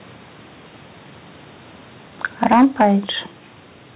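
From 2.25 to 2.87 s, microphone overload: peaks hit the converter ceiling, likely from input gain about 9 dB too high, adding harsh crackle. The waveform tops look squared off, with smeared distortion across the spectrogram. At 2.54 s the microphone volume is stepped down by 3 dB, likely the call software reacting to the clipping. The waveform envelope drops abruptly, with a slightly weaker spectrogram below the 4 kHz band limit.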